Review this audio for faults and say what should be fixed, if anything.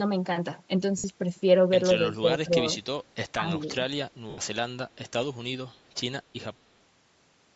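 Throughout, the speech has a breathy, grainy edge on its upper range, likely from Bluetooth LC3 compression. The transform codec drops much of the high spectrum and fills it with noise. The damage is plainly audible, with about a 48 kbps stream and 10 ms frames.

Lost LE Audio frames occur at 0.98–1.04 s and 4.30–4.38 s. The first gap lasts 60 ms and the second 80 ms. That fits runs of six and eight lost 10 ms frames. The decoder repeats the last spectrum with scrambled signs, so each gap becomes a short noisy smear that fades.

The talker's speech dips at 1.94–2.25 s, 2.44–2.64 s, 3.36–3.45 s and 3.62–3.77 s. The first two drop by roughly 20 dB, the third by about 15 dB and the last only slightly. This is speech suppressed in double talk. The echo canceller likely confused the talker with loudspeaker echo and turned both down.

The call microphone processing, which leaves nothing above 8 kHz, is not itself at fault.

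To prevent these faults, raise the LC3 bitrate, improve the Bluetooth link to stop frame loss, and tune the echo canceller's double-talk detection so it does not duck the near talker.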